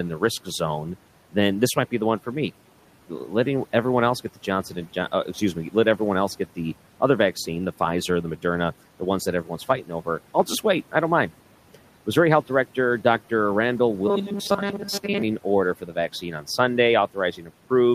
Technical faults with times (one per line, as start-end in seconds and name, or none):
9.84-10.07 speech cut by the noise suppressor
14.08-15.22 robotic sound from repeated short buffers
15.81-16.45 speech cut by the noise suppressor
17.37-17.50 speech cut by the noise suppressor